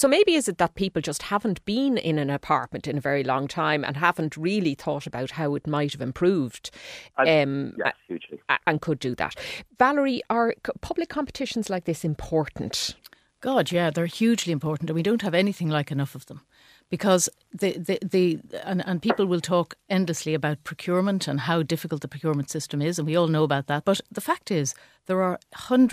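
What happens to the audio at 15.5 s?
Nothing goes wrong at 15.5 s; the speech carries on intact through that moment with no dropout, glitch or distortion to be heard.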